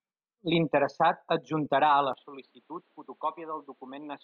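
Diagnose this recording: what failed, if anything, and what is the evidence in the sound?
At 2.13 s the speech turns dull, cut off above 4.6 kHz, about 5 dB quieter. Likely the driver switched input to a poorer device.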